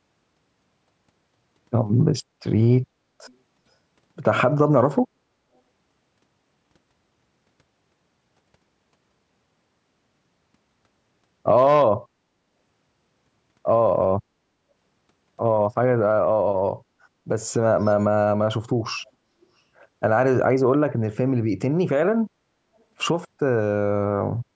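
At 3.27 to 3.35 s, 19.05 to 19.11 s and 19.42 to 19.46 s, brief scraps of echo leak appear. A faint copy of the speech returns about 383 ms late, roughly 35 to 40 dB down. Likely cause: an echo canceller letting loudspeaker pickup through.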